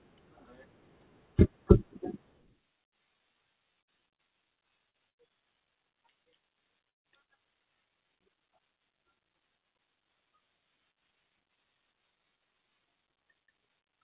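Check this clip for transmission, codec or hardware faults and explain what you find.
There's packet loss on this speech clip, concentrated between about 3.8 and 7.4 s, heard through a narrowband call path with nothing above 4 kHz, which fits G.711 mu-law coding.

Short concealed packet loss hits at 3.84, 4.15, 4.90 and 7.24 s. In each case roughly 40 ms of audio never arrived, and the receiver patched about 30 to 35 ms by extending the previous sound. You hear quick smears or wobbles. The last one also stretches things by a small fraction.

A burst of packet loss happens twice, at 5.10 to 5.20 s and 6.89 to 7.07 s. About 80 ms and then 160 ms went missing in a row. The concealment carries the last sound on and fades it, and the longer gap drops to silence for about 150 ms before the audio resumes further along.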